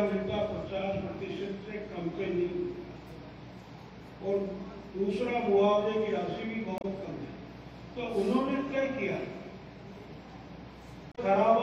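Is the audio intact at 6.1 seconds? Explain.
Yes, the audio is intact at 6.1 seconds, with no dropout, click, distortion or other fault at that point.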